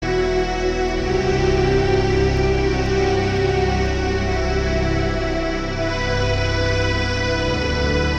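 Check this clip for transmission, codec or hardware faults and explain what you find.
I find no transmission, codec or hardware faults in this music clip.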